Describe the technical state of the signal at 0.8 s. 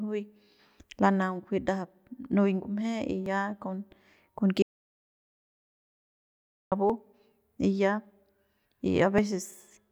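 At 0.8 s the speech signal is intact, with no audible technical fault at that moment.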